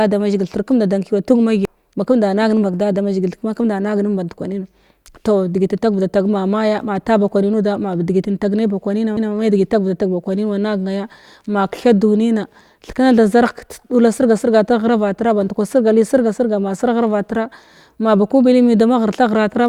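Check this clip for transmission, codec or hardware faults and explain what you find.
Two CD skips are present, at 1.65 to 1.67 s and at 9.17 s. Each time the laser jumped tracks after a jolt or flaw, muting briefly before resuming elsewhere. The speech ticks and lurches.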